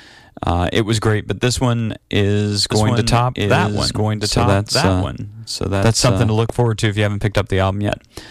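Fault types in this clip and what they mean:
Doubled audio track: From 2.72 s, just after "but this one is", to 6.34 s, before "look forward to if", a second full-band copy of the speech runs about one and a half seconds behind the original at about 5 dB lower, with no added reverb. It is likely a second capture path or an out-of-step edit. On a spectrogram the formant pattern repeats, shifted right, and the waveform shows overlapping envelopes that start and stop abruptly.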